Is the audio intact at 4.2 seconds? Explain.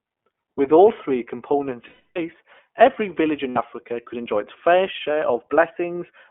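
No. At 4.2 seconds, as across the whole clip, the speech carries plainly audible iLBC codec damage. It is cut to a narrow line band of about 250 Hz to 3.4 kHz, and each short frame, consistent with 20 ms framing, is coded on its own. That independent frame coding makes the speech sound rough and synthetic, which a plain telephone-band filter would not do.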